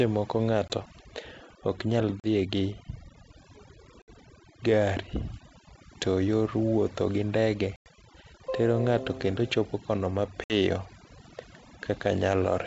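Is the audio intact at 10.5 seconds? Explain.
No. Packet loss on an ADPCM call hits from 10.44 to 10.53 s. A few packets, about 60 ms of audio, never arrived and were filled with silence. The receiving decoder's adaptive predictor and step size then drifted out of step with the sender's. The result is a hard-edged gap in the speech. When it resumes, the speech is slightly distorted before it settles over the next few tens of milliseconds.

Overdone noise removal is also active at this moment, as it is across the whole clip. The noise reduction is set too aggressively, so any frequency band near its noise estimate gets pulled far down or muted, and the quieter parts of the voice go with it. Around the gap, the background is lowered and broken up into twinkling specks. The G.722 wideband coding carrying the call adds little or nothing to this.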